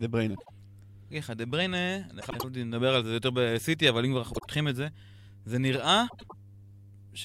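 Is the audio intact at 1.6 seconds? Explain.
Yes, at 1.6 seconds the speech plays through intact, with no dropout, click, distortion or other technical fault at that moment.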